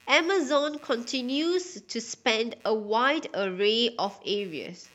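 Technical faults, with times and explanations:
Throughout, computer activity noise: a faint buzzy chirping pulses at roughly 150 times a second, around 35 dB below the speech. Changing processor or graphics load disturbs the shared audio ground. Unlike steady mains hum, it flickers with machine activity, not the sound.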